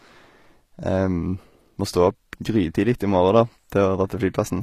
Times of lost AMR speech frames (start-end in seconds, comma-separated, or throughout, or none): none